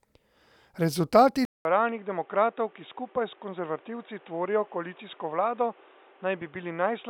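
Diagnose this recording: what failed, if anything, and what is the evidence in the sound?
At 1.45 s there's a 200 ms gap, then boxy speech with nothing above 3.8 kHz, quieter and noisier: likely the input switched to a poorer device.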